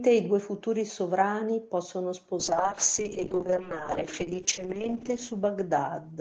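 From 2.4 s to the end, a call bitrate drop makes the speech rough and watery as its top end narrows from 20 kHz to 8 kHz, pointing to a fall from about 48 to 6 kbps. Unlike a simple low-pass filter, coarse coding grit comes with the muffling.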